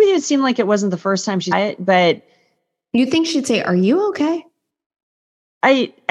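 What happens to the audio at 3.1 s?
Nothing goes wrong at 3.1 s; the speech there plays through intact, with no dropout, click, glitch or other fault.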